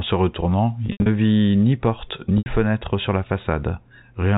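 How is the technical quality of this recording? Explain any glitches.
The recording has two brief dropouts. The sound is narrowband telephone audio with nothing above 4 kHz, consistent with G.711 coding.

From 0.86 to 1.06 s, the sound turns buzzy and seems to hang on one pitch, then thins and fades. From 2.38 to 2.46 s, a shorter stretch does the same. This is packet loss with pitch repetition. In the first event, about 140 ms of audio went missing in gaps spread over 200 ms, with the longest continuous gap 80 ms. In the second, a single gap of 80 ms was lost. To cover each gap, the receiver replayed the last pitch period and faded it down, so the held, buzzy tone decays toward silence before normal audio cross-fades back in.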